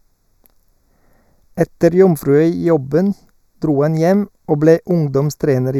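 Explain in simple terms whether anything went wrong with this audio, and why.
Something did go wrong: the speech sounds hollow and a bit phasey the whole way through. That's channel delay (comb filtering). One channel runs a fraction of a millisecond late, so when the two are mixed, matching parts cancel, carving notches starting around 3 kHz.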